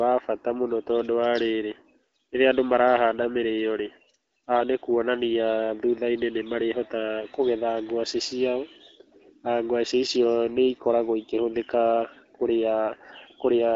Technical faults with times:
none

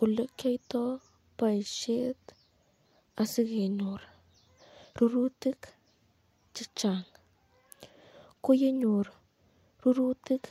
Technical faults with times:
none

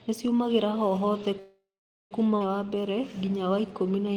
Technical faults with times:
1.39-2.14 call audio freeze
2.39-2.43 skip ahead
2.66-4.16 jitter buffer slow-down

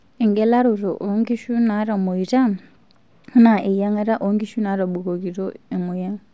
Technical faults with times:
none

